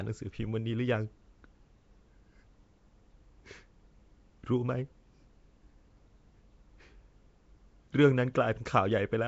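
Throughout the speech, a low-rate block codec, likely Nellymoser compression, has starved weak bands of bits and filled them with noise, fitting a rate near 32 kbps. The voice carries a rough, hissy halo and a smeared, underwater quality, with nothing above 7.7 kHz.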